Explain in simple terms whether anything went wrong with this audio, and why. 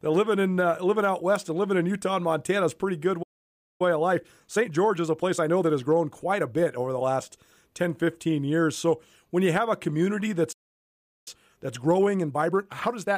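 Two things went wrong, and each happens twice.

The first is a playback stall. At 3.22 s, just after "is a pretty good", the speech stops dead for about 0.57 s. At 10.52 s, after "you have a community", it stops again, this time for about 0.74 s. It simply freezes and then carries on. The likely cause is that the player briefly ran out of audio data, or was held up, and had to wait.

The second is time-compressed catch-up. After each stall, the player tries to make up the lost time. From 3.82 s to 6.82 s, ending near "the last", the speech runs about 1.15 times faster than normal. The same happens from 11.28 s to the end of the clip. The pitch stays normal, so nobody sounds squeaky. But the talking feels rushed. That comes from tiny pieces being cut out and blended together.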